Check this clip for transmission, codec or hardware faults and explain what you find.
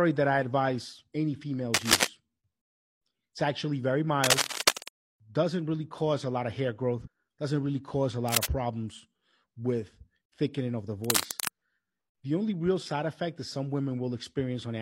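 Two kinds of fault turn up in this speech clip: cable scratch noise at four points and one instance of compressed frames skipped.

Cable scratch noise, at 1.74 to 2.07 s (just after "that I advise any"), 4.24 to 4.88 s, 8.28 to 8.46 s, and 11.04 to 11.49 s (after "with thickening of the"): a worn connector or cable is likely shifting its contact resistance, laying dense, ragged scratching over the speech at roughly its level, a little louder in the first two bursts.

Compressed frames skipped, at 7.02 to 7.08 s, between "a lot of hair" and "doesn't really cause a": whole frames were missing or refused by the decoder, so around 150 ms of audio is lost and the speech jumps ahead.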